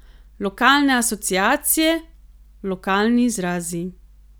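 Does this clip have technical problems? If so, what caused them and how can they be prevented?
No, no technical problems heard.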